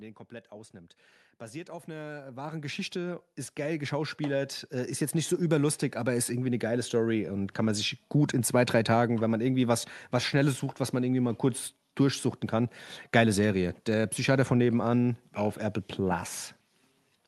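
From 1.66 to 5.58 s, automatic gain rising lifts the speech and room noise together by about 16 dB, settling before "aber ist irgendwie eine".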